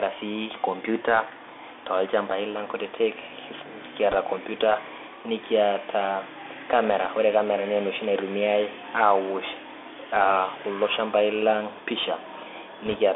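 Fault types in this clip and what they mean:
Bluetooth CVSD headset codec: one-bit delta modulation at 64 kbps confines the audio to roughly 300 Hz to 3.5 kHz, with plainly audible granular hiss and scratchy sibilants throughout.
Bit errors on a Bluetooth voice link: flipped bits in brief bursts near 4.11 s, just before "computer niata", and 12.86 s, giving a short crackly rush rather than clicks.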